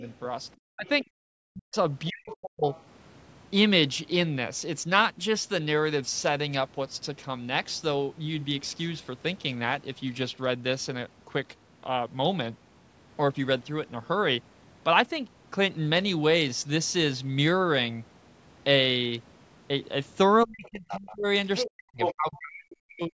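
From 0.59 to 2.68 s, and again from 20.45 s to the end, the speech drops in pieces, up to about 40 dB deep. This is speech suppressed in double talk, likely an echo canceller ducking everything while both sides talk, rather than a steady level fade. Between 0.86 and 1.04 s, 2.05 and 2.81 s, and 20.65 and 22.38 s, a second voice sits under the talker at about 30, 20 and then just 5 dB down. That is the other side's voice leaking through, likely loudspeaker echo the canceller missed. At 1.16 to 1.23 s the room sound alone dips by about 33 dB for 70 ms and then returns, which is background gated by the echo canceller rather than a dropout, since the signal continues underneath at a lower level.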